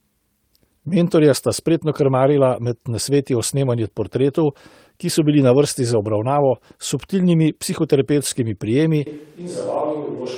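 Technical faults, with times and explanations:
0.89 s and 4.01 s, lost packet rebuilt from error correction: a single 20 ms packet went missing each time, right before "sta spretno" in the first case. The decoder played the low-bitrate copy carried in the next packet, so there's no gap, just a brief rough, noisy patch.
9.07 s to the end, switch to a distant microphone: the speech abruptly turns roomy and hollow, loses bass, drops about 10 dB, and room noise rises to roughly 30 dB below the speech. That's likely the close mic cutting out and a farther one taking over.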